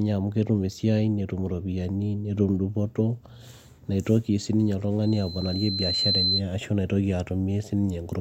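A speech recording with loudspeaker feedback squeal. Just after "neitoki sii ninye", at 5.02 s, a pure tone near 4.1 kHz starts rising. It swells over about a second and ends at 6.42 s. At its peak it sits roughly 5 dB above the speech. A microphone was picking up the loudspeaker it fed. At that one frequency the loop gain passed unity, so the tone fed on itself and kept growing.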